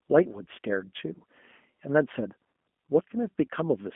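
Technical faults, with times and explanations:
Throughout, G.729 codec: the speech is rebuilt from a vocal tract filter, a pitch predictor and a few pulses per subframe, so it sounds slightly rough and synthetic. Nothing passes above 3.6 kHz, and the narrow telephone band suggests an 8 kbit/s G.729A link.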